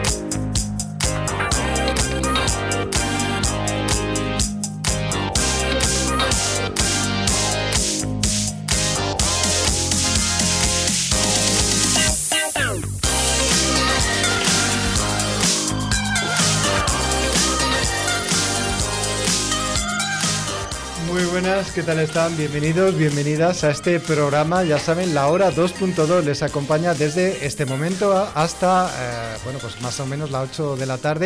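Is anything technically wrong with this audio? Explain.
No, nothing here sounds technically off; the audio just sits there doing its job without a single hiccup worth pointing out.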